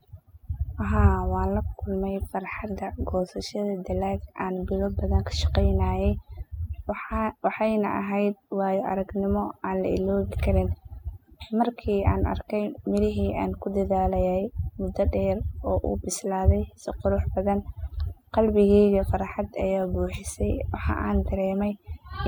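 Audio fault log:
Throughout: overdone noise removal. The noise reduction is set far too aggressively, pulling individual frequency bands down whenever they sit close to the estimated noise floor. The background drops and breaks up into small chirping specks, and softer speech components are stripped away.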